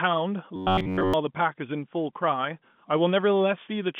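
A speech clip heard over a telephone line that passes nothing above about 3.5 kHz. From 0.56 to 1.14 s the voice collapses into robotic sound from repeated short buffers. A rigid, metallic buzz at 93.8 Hz runs across the whole stretch. The likely cause is audio arriving too slowly, with the player looping the last fragment to fill the gaps. That rate fits a fragment of roughly 11 ms, and the real audio in between is lost.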